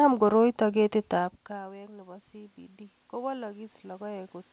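From 0.66 s to the end, automatic gain rising: after the input dropped by about 21 dB, as the talker moved away around 1 s, the gain control climbs slowly to compensate, so the voice and room noise swell up together.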